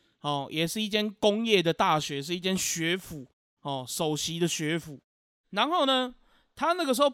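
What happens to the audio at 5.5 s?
At 5.5 s the audio is intact, with no dropout, distortion or other fault.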